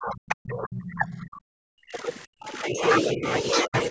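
From the start to 2.09 s, the speech is pulled down hard, at times by around 40 dB. This is speech suppressed in double talk. Both ends were likely talking at once, so the echo canceller could not tell the local talker from the loudspeaker echo. It turned everything down. From 0.86 to 1.27 s, a second voice comes through faintly, well below the speech. This is the other side's voice leaking through, likely echo the canceller missed. From 2.25 to 2.84 s, the speech is suppressed again, by roughly 40 dB at its deepest. Within that stretch, from 2.44 to 2.52 s, a brief, weaker scrap of the other voice slips through. Two shorter dips follow. From 3.12 to 3.28 s the level drops by about 20 dB. From 3.65 to 3.74 s it drops by about 30 dB. Both are quick dips in the speech.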